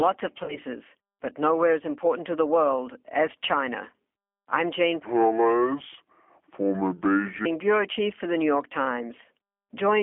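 G.729 coding runs throughout: the 8 kbit/s speech codec rebuilds the voice from a filter, pitch predictor and sparse pulses, so it sounds plainly rough and synthetic within a 200 Hz to 3.4 kHz band.

VoIP packet loss concealed by the speech codec occurs from 0.44 to 0.58 s. About 40 ms of audio went missing, which fits two lost packets. The decoder extended the previous sound as a fading buzzy tone or coloured noise, and the voice stays weak after the packets return.

A section at the wrong speed runs from 5.05 to 7.45 s, just before "bureau chief for the". It plays at 0.629 times normal speed, so the voice is slow and deep, roughly seven semitones lower. The likely cause is that this stretch was fitted to the wrong clock.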